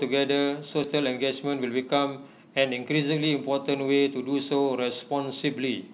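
At 0.84 s a skip ahead occurs: roughly a fifth of a second of speech never reached playback, so the sound jumps forward with no gap or fill. On a waveform the two sides butt together abruptly, and the spectrogram shows a hard vertical seam where the formant tracks change without transition.

From 1.45 to 1.83 s comes a jitter buffer speed-up. The receiver trimmed short pitch-period slices, a few tens of milliseconds in all, to shrink excess buffered delay, so the speech runs at 108% speed with unchanged pitch and sounds slightly hurried. The spectrogram shows harmonics at normal spacing but syllables compressed in time, while the band above 4 kHz stays empty throughout, as expected from the G.711 mu-law call path.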